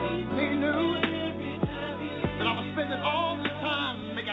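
At 0.30 to 0.32 s, a skip ahead: roughly 0.7 s of audio was discarded, so playback jumps forward with no gap, the two sides spliced almost directly together.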